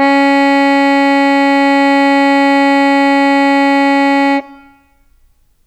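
A short piece of music, with nothing technically wrong to point to anywhere in it. No dropouts, distortion or other faults turn up at any moment that would call for a time or a cause.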